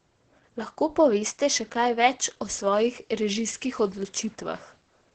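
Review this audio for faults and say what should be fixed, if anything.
Opus voice compression throughout: the speech stops near 8.8 kHz and sounds hoarse and robotic, from coarse SILK excitation coding at about 10 kbps. A plain low-pass would dull it without roughening it. Encode at a higher bitrate.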